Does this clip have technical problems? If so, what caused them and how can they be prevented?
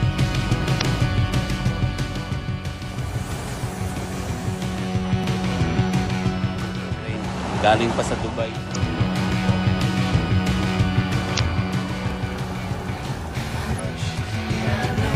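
Yes. Short bursts of damaged data in a compressed stream are heard at 0.77–0.82 s, 8.71–8.76 s, 11.35–11.40 s and 13.76–13.79 s, each lasting about 40 ms. Corrupted bytes make the decoder misread frames and lose sync until it finds the next valid header, giving a brief chirp, squawk, click or short hole. These bursts come at irregular moments. Adding checksums and error protection to the stream, or fetching it over a reliable transport, would prevent them.

There is also a regular click about every 3.8 s, from 1.43 s to 15.07 s, about five in all. This even spacing points to clock drift buffer slips, likely caused by two devices disagreeing on sample rate by roughly 700 parts per million. Each time the buffer between them over- or underflows, a block of roughly 150 samples is dropped or repeated. Unlike the corruption bursts, these come at a steady interval. Locking both devices to one word clock, or using adaptive resampling, would prevent them.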